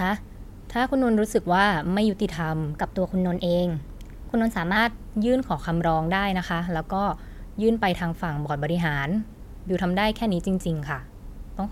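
Wrong sample rate, 2.77 to 4.76 s: the speech turns slightly higher and faster, 1.09 times faster and 1.5 semitones up, which fits 44.1 kHz audio played at 48 kHz.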